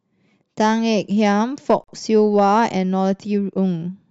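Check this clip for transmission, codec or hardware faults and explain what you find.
One fault is present, a gap at a join of encoded pieces. At 1.84 s the speech drops into silence for about 44 ms, ending at 1.88 s, with softened edges, then resumes exactly where it broke off. The clip was built from pieces about 2 s long, each encoded on its own and joined untrimmed, so one piece's padded final frame and the next piece's startup delay sit back to back as a short hole in continuous sound.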